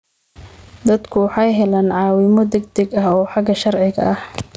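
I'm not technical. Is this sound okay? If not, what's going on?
No, it isn't quite right. What you're hearing is gain pumping, and it runs through the whole clip. Everything sounds squashed, with loud and quiet bits pushed close together. The likely cause is the microphone level being set far too high, with a fast limiter yanking it back down on every loud moment.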